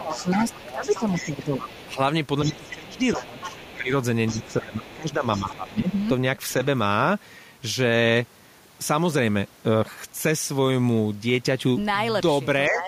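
A speech recording with echo trouble early on: the other side's voice leaks through from 0.0 to 1.86 s and 2.44 to 5.74 s at roughly 15 dB under the talker, with a much fainter scrap at 6.49 s, likely an echo canceller missing loudspeaker pickup. Speech is suppressed in double talk across 0 to 6.08 s, dipping up to about 15 dB for around four seconds in all, plus a brief dip of about 10 dB at 12.68 s, likely the canceller ducking both voices at once.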